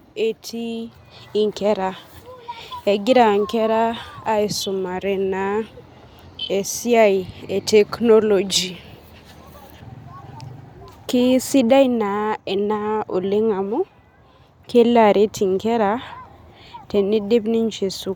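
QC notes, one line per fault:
Nothing to flag here; the speech comes through with no faults to note.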